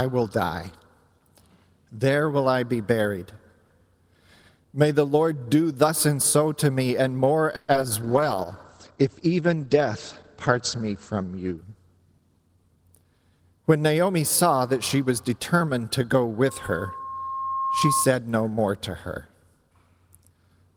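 At 7.55 s the sound stops advancing for about 130 ms. The last moment is stretched into a fading buzz, and then the audio resumes where it left off. This is a call audio freeze, likely caused by packets held up in transit until the jitter buffer ran dry. Nothing is lost, but the delay grows by 130 ms.

Right after, at 7.72 to 7.74 s and again at 7.81 to 7.83 s, there are two short concealed packet losses. Each gap is covered by about 10 ms of extrapolated sound before the decoder blends back into real audio. The result is a brief smear or wobble rather than a clean hole.

From 8.04 s to 12.96 s a call bitrate drop takes the encoder from 32 kbps down to 15 kbps, and it stays at the lowest rate for about 3 s. Audio bandwidth shrinks from 20 kHz to 8 kHz. The sound turns muffled and coarse, with a watery texture, until the rate recovers.

Overlapping the end of that, from 11.97 s to 13.05 s, a jitter buffer speed-up plays the audio at about 112% speed. 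It drains the backlog by cutting pitch-period slices, around 150 ms in total. Pitch is unchanged, but the passage sounds noticeably hurried.

From 16.45 s to 18.14 s a loudspeaker feedback squeal appears. The microphone-to-speaker loop exceeds unity gain at 1.1 kHz, so a single tone swells over roughly a second and a half. It ends up around 5 dB above the programme material, a squeal until it stops.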